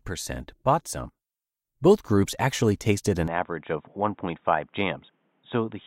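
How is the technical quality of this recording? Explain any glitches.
The recording has one glitch in its second half. From 3.28 s to the end, the input likely switched to a poorer device: the new path cuts everything above 3.8 kHz, so the speech turns dull and boxy, drops about 5 dB, and gains a faint new noise floor roughly 40 dB down. There is no gap at the switch.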